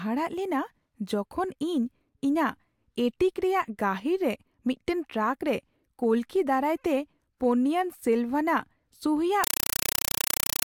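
Just after "ᱫᱟᱨᱟᱭᱛᱮ ᱯᱳᱱᱱᱤᱭᱟᱱ ᱥᱮᱞᱵᱷᱟᱱᱟᱜ ᱥᱩᱦᱤᱭᱟᱜ", from 9.44 s to the end, a compressed stream played as audio takes over. Undecoded AC-3 frames come through as loud chattering static, with 5.33 ms noise bursts 31.25 times a second.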